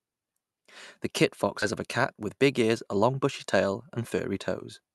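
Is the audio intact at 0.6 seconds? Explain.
Yes, the audio is intact at 0.6 seconds, with no dropout, glitch or other fault at that moment.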